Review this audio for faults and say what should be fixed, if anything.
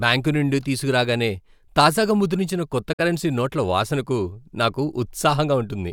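A soft-edged dropout from 2.93 to 3.00 s, after "తీసుకురాగానే తాజాగా ముద్రించిన కొత్త", is AAC frame loss with muting: the decoder zeroed about 64 ms of lost frames, fading smoothly out and in. Protect the stream with retransmission or forward error correction, or use a decoder with concealment rather than muting.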